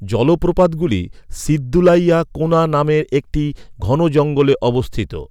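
Hard clipping appears in four bursts, each where the speech pushes past the level some stage can pass, so the peaks are sliced flat. It runs from 0.23 to 0.93 s at about 3 dB over, 1.75 to 2.16 s at about 5 dB, 2.53 to 2.62 s at about 2 dB just before "নামের একটি", and 3.93 to 4.52 s at about 4 dB just after "নামের একটি". The flattened tops add high harmonics, heard as crackly, harsh fuzz on the loud syllables, strongest in the second burst.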